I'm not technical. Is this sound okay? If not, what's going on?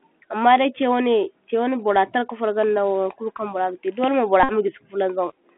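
No. The whole clip has the sound of a Bluetooth headset's CVSD codec, the basic phone-call link between headset and phone. Everything above about 3.4 kHz is missing, which makes the speech sound boxed-in and thin. Unlike an ordinary phone line, which is narrow but clean, this link also adds a grainy hiss under the speech and a scratchy edge on s sounds, because it tracks the sound in small up-or-down steps that can't keep pace.

Around 4.43 to 4.52 s there is a Bluetooth headset packet repeated fault. For a brief moment the radio link dropped the incoming audio, and the receiving chip filled the gap by replaying the last piece it had received over and over, which fits a run of roughly fifteen lost packets. That gives a short, even buzz instead of speech. A plain dropout would leave silence or a click, but here you hear a steady buzzing tone until normal speech returns.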